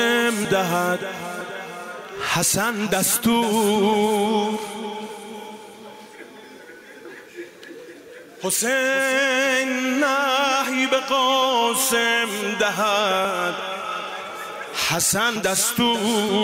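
The audio skips abruptly at 0.45, 1.41, 13.25 and 15.36 s, each a jump where tens of milliseconds vanish, likely a dropped buffer (overrun), seen as a waveform discontinuity and a thin vertical spectrogram streak.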